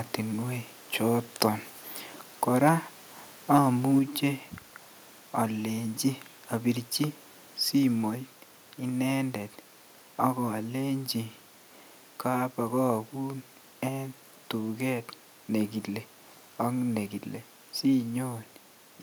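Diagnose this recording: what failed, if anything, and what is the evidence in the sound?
Likely microphone overload at the converter: from 2.66 to 2.69 s the peaks overshoot full scale by about 2 dB, their flattened tops crackling harshly.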